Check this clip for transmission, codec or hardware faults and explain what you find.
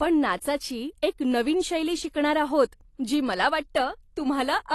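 One codec fault is present, running through the whole speech recording. AAC compression damage is plainly audible from start to finish: the sound is dull and smeared, with a fizzy, warbling edge on sibilants, and nothing above 12 kHz survives. The likely cause is AAC-LC at a low bitrate, around 32 kbps, where the encoder drops high bands and coarsely quantises the rest. A spectrogram shows a flat ceiling at 12 kHz and patchy, holed energy below it.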